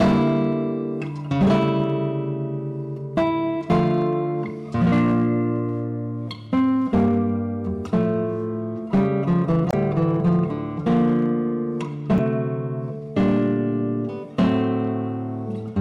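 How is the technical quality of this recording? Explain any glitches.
The recording has two technical problems: clipping across the whole clip and two brief glitches from corrupted compressed data.

Hard clipping runs from start to finish. The signal was driven about 10 dB beyond what one stage in the chain could carry, so every peak above that ceiling was sliced flat. A few percent of the samples hit the limit. Those squared-off tops create harmonics high in the spectrum, which add distortion to each loud moment.

Damaged data in a compressed stream appears at 9.68 to 9.74 s and again at 12.15 to 12.19 s. At these points part of the encoded stream was wrong, so the decoder could not read those frames correctly and lost its place until it found the next valid frame header. Each event lasts only a few tens of milliseconds and is heard as a chirp, squawk, click or brief gap.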